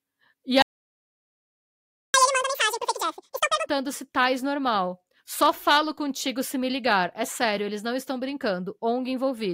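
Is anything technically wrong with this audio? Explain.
Yes. From 0.62 to 2.14 s there is a playback stall: the player likely ran out of data, so the sound cuts to silence for about 1.5 s. Then, from 2.14 to 3.66 s, there is catch-up at higher speed: the player resamples its backlog at 2× speed, so the audio rushes by about ten semitones higher until it settles.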